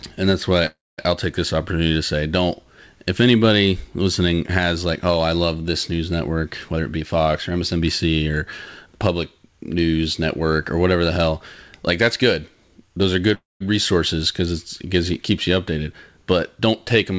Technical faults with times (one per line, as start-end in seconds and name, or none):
0.66-1.00 call audio freeze
6.73-8.38 jitter buffer speed-up
13.34-13.62 call audio freeze